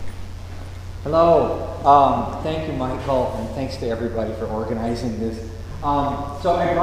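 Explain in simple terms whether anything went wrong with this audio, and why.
A steady mains buzz runs under the sound from start to finish. It comes from the 60 Hz electricity supply leaking into the recording chain, typically through a light dimmer, a power rectifier or a poorly shielded cable. These parts create sharp electrical spikes twice per mains cycle, and those spikes spread into a stack of tones reaching several kilohertz. The result is a raspy hum. It sits well below the main sound but never lets up.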